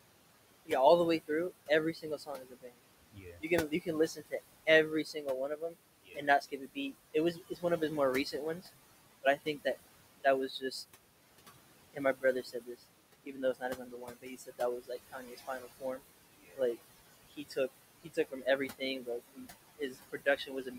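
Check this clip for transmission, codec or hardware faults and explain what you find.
Two faults come from the noise suppressor. The room noise itself sits about 14 dB below the speech.

Noise suppressor artifacts run through the whole clip. The suppressor pulls down every band it judges to be steady noise by about 20 dB, frame by frame. The background therefore sinks in the gaps between words and rises again underneath the speech.

Speech cut by the noise suppressor occurs from 0.66 to 8.68 s, 9.23 to 10.91 s, 11.93 to 16.77 s, and 17.33 s to the end. The suppressor mistook quieter parts of the speech for noise and lowered them by about 21 to 22 dB, so soft consonants and word endings sound swallowed or faint. The affected stretches add up to roughly two seconds, a fraction of a second, two seconds and one second respectively.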